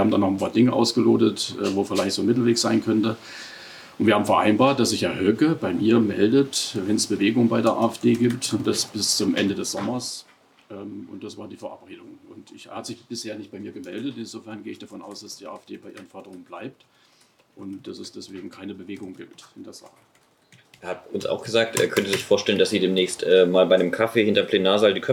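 Zipper noise runs from 20.57 to 21.73 s. The level moves about 15 dB in 2 dB steps, roughly seven a second, with no smoothing, so each step ticks audibly.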